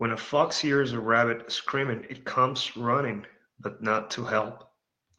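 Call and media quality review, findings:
No audible faults found.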